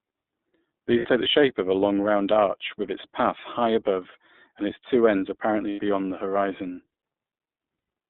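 The speech passes through an iLBC codec for its full length. Each block of the signal is coded independently, and the roughness fits the 13.33 kbps mode with 30 ms frames. The line band runs from about 200 Hz to 3.7 kHz, so the voice sounds thin and boxed-in with no top end. The codec damage is plainly audible as a coarse, slightly synthetic texture over every syllable.

Packets carrying lost iLBC frames then drop out three times. Each time, the decoder covers the hole by repeating the last pitch cycle blended with noise. At 0.99 s about 60 ms goes missing, which fits two frames, and it comes through as a short, buzzy held vowel. At 5.69 s a 90 ms loss gives a longer smeared hum. At 7.76 s the 120 ms gap stretches into a breathy drone that fades before normal speech snaps back.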